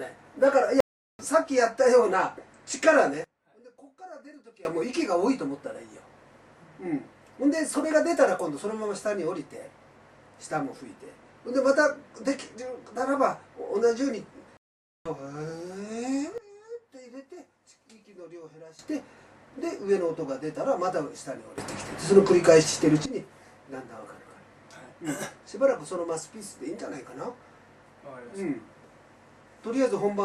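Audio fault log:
0.80–1.23 s and 14.57–15.09 s, stream reconnect: the audio cuts out for 386 ms, then 484 ms, and comes back roughly half a second further on each time, because the player dropped the connection, rejoined the live stream and restarted its decoder mid-flow.
3.24–4.65 s, 16.38–18.79 s and 21.58–23.06 s, sudden gain jump: level and background noise step together, down about 24 dB, down about 16 dB, then up about 16 dB, each with no ramp, likely a gain setting applied instantly between samples.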